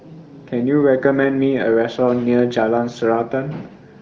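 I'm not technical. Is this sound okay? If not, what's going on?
Yes, this speech recording is fine: it has gone through the AMR wideband (HD Voice) phone codec, and at this setting any trace of it is faint at most, so nothing needs attention.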